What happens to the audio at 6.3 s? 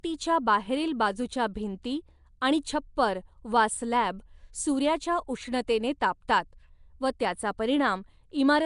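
Right after "वा स्लॅब सूर्याच्या उष्णतेने", at 6.28 s, there's a pre-echo: a short hiss about 10 ms long smearing in just ahead of the attack, because the codec spread the loud part's quantisation noise across the quiet start of that block. Under it you hear the rough, hissy, underwater character that runs through the whole clip, with nothing above 10.6 kHz, likely Nellymoser compression at a rate that sounds around 44 kbps.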